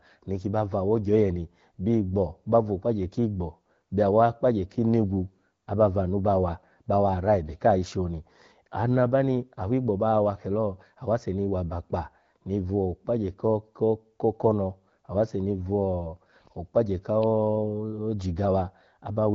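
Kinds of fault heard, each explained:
No faults found; the speech runs over the AMR wideband (HD Voice) codec at 12.65 kbit/s, with the light coding character expected at that rate.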